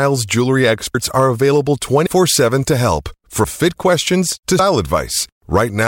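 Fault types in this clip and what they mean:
Compressed frames skipped: whole frames of the coded stream never reach the output, so the speech jumps forward with no gap or pause. This happens at 0.94, 2.06, 3.44 (between "to help" and "fit questions to") and 4.59 s. The first three jumps each drop roughly a tenth of a second of speech, and the last one drops nearer 150 ms, which fits losing a few 32 ms frames.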